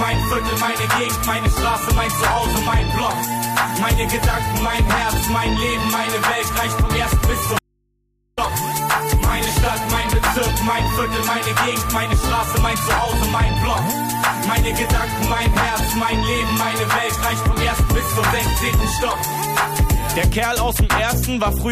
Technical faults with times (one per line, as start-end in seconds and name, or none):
7.59-8.37 audio dropout to a faint residue